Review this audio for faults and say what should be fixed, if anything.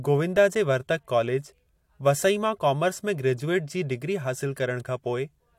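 Nothing here needs fixing; I listened carefully and didn't hear any faults in this speech.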